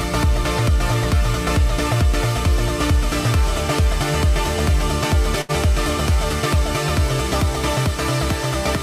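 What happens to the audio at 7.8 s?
Nothing goes wrong at 7.8 s; the audio plays through that moment intact, with no dropout, click or other disturbance.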